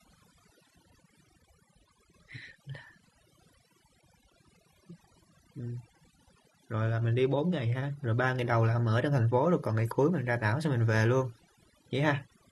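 Overdone noise removal runs throughout the speech: bands near the estimated noise level are pulled down hard, leaving twinkling specks in near-silence and taking quiet parts of the voice with them.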